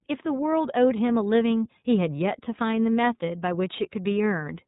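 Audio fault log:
throughout, iLBC codec: the speech is plainly rough and slightly synthetic, with nothing above 3.8 kHz, giving a narrow, telephone-like band. Each 30 ms frame's excitation is coded independently of the previous frame, which fits iLBC's 13.33 kbps mode.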